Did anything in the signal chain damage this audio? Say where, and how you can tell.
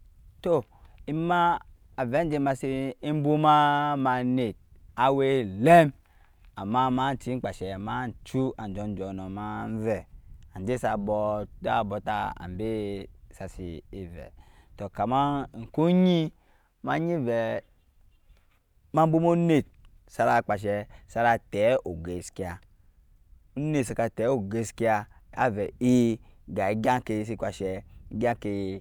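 No, nothing in the signal chain damaged this audio.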